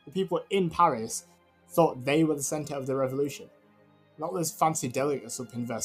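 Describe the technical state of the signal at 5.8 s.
Held sound and tails sink while attacks pass, so it pumps, flutters or thins, swinging around 10 dB: a noise suppressor, active throughout, treats steady tones as noise.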